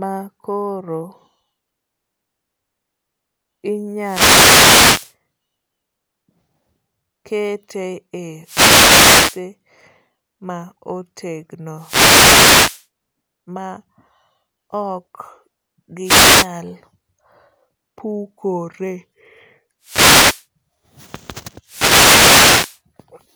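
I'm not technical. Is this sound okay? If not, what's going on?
No. The speech is interrupted six times by a wireless microphone noise hit, a short burst of hiss or static. These come at about 4.0 to 5.1 s, 8.4 to 9.4 s, 11.8 to 12.9 s, 16.0 to 16.5 s, 19.8 to 20.5 s and 21.6 to 22.8 s. The radio link between microphone and receiver is dropping out as its signal weakens, so the receiver's own noise takes over for around half a second to a second each time.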